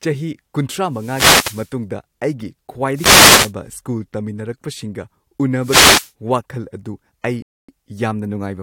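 Short swishes of static wash over the voice from 0.87 to 1.77 s, 2.94 to 3.53 s and 5.59 to 6.12 s. These are wireless microphone noise hits, where the FM radio link fades as reflected signals cancel and receiver noise rises over the voice. At 7.42 s the speech cuts to silence and resumes at 7.69 s exactly where it stopped. This rebuffering stall comes from the player running out of downloaded audio and waiting for more, which adds about 0.26 s without losing anything.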